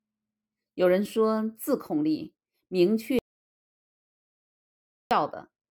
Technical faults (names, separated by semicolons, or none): audio dropout to silence